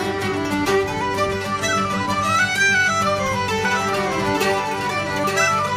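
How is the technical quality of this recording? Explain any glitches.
The recording has one glitch, a doubled audio track starting at 3.65 s and lasting to the end. From that point a second full-band copy of the same sound, about 5 dB quieter, trails the original by about a second. It most likely comes either from the sound being captured again through a slower path or from an edit that holds two copies out of step. The copy begins abruptly, with no decay or room colour.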